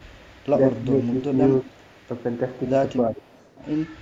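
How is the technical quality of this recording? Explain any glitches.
The speech is marred by repeated dips and one brief echo.

Speech suppressed in double talk occurs from 0.83 to 1.34 s, 1.63 to 1.79 s and 3.1 to 3.33 s, each time dropping the speech by up to about 15 dB. The likely cause is an echo canceller turning the talker down while the far side also spoke. The waveform pinches in, and the spectrogram's upper bands fade.

An echo leak appears from 1.82 to 2.0 s: a faint copy of the speech, about 40 dB below it, arriving 349 ms late. It likely comes from a loudspeaker's sound reaching a microphone without being fully cancelled. On a spectrogram it shows as a dim, shifted repeat of the speech pattern.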